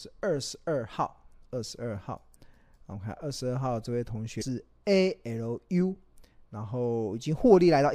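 At 4.38 to 4.42 s, damaged data in a compressed stream breaks the flow of the speech. A short stretch of the encoded data arrives corrupted, so the decoder cannot parse those frames correctly, loses its place in the bitstream and has to hunt for the next valid frame header before it can resume. For roughly 40 ms the speech is lost, heard as a brief chirp, squawk, click or short hole that cuts abruptly across the talker.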